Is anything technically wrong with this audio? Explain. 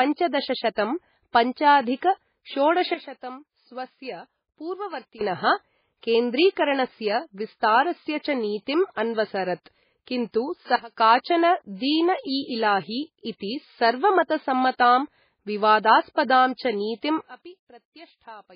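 Yes. There are two kinds of fault.

Throughout, the speech sounds watery and swirly, with smeared attacks and nothing above 5 kHz. This is likely heavy MP3 compression. Starved of bits, the encoder drops weak frequency lines that flicker between frames. The damage points to a very low bitrate, around 16 kbps.

There are also three sudden gain jumps. Speech and background noise drop together by about 12 dB from 2.94 to 5.21 s, about 18 dB from 10.76 to 10.97 s, and about 22 dB from 17.21 s to the end. The likely cause is a digital gain change applied without a ramp.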